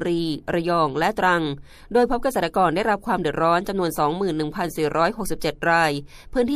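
At 5.40 s there is pre-echo. Noise rises about 14 dB for 15 ms before a sharp attack. The codec spread its quantisation noise across a 36 ms block and never switched to short blocks. A brief hiss leads the attack, which sounds smeared.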